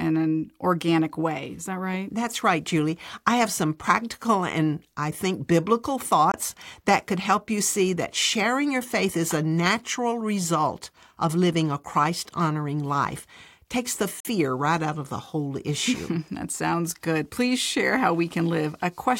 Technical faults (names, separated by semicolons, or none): Bluetooth dropout